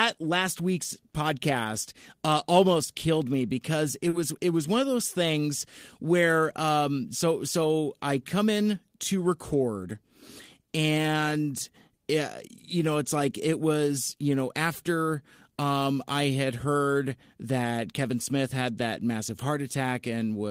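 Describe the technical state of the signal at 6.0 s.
At 6.0 s the speech signal is intact, with no audible technical fault at that moment.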